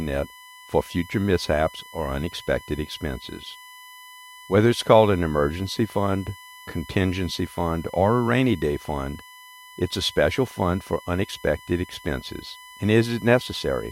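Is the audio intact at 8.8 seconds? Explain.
No, not quite. A USB whine runs through the whole clip, 8.8 s included: a steady 1 kHz tone sitting roughly 25 dB under the speech. It's the bus drawing current in 1 ms frames and leaking that pulse rate in through power or ground.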